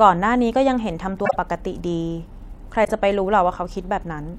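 Speech with two brief garbled flutters: one from 1.25 to 1.36 s and another from 2.84 to 2.92 s. These are frames out of order. In each case two neighbouring blocks of decoded audio, each about 26 ms long, which fits single codec frames, arrived swapped and were played that way. The exchanged halves create discontinuities at the three boundaries, and no time is lost.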